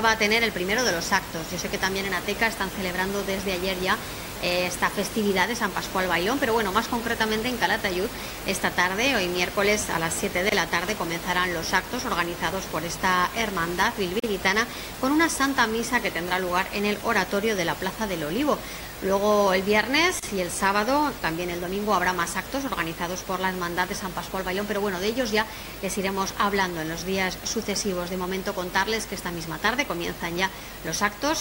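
Gaps at joins of encoded pieces fall at 10.49 s (27 ms), 14.20 s (41 ms) and 20.19 s (32 ms). Separately encoded segments were butted together with their start-up delay and end padding left in, so the sound drops out abruptly, edges smeared, then resumes where it stopped.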